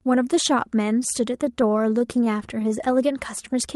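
From 1.45 to 2.81 s the speech shows repeated stalls (stutter). The jitter buffer ran dry more than a dozen times, each gap lasting at most 14 ms, and the receiver stretched the preceding sound to cover them. About 135 ms was filled in this way, roughly a tenth of that span, with nothing lost, so the audio drags and flutters unevenly.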